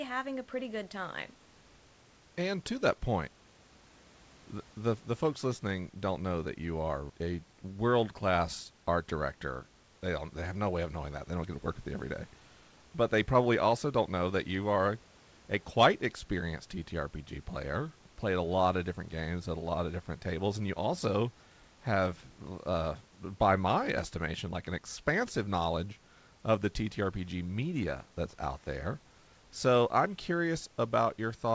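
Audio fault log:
No faults found: the speech arrives over a G.722 call path with nothing above 8 kHz, and room noise sits about 34 dB below it.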